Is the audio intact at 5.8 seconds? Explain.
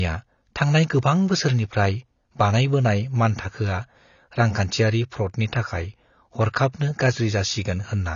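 No. At 5.8 seconds, as across the whole clip, the speech carries AAC compression damage, likely from AAC-LC coding at a rate that fits roughly 24 kbps. At that rate the encoder quantises each frame's frequency lines coarsely against its hearing model and discards the top of the spectrum, so nothing sounds above 7 kHz. Unlike a simple low-pass filter, which would only dull the sound, this clip also carries plainly audible coding damage on top of the lost treble.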